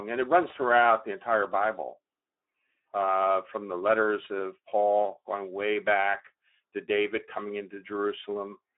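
Speech runs through the Speex codec for its whole length, and the coding damage is plainly audible. This CELP coder has too few bits for the excitation signal, so the speech comes out noisy and hoarse, which points to a low setting near 11 kbps. The band is confined to a telephone-style line of about 300 Hz to 3.6 kHz, with nothing present above 3.8 kHz.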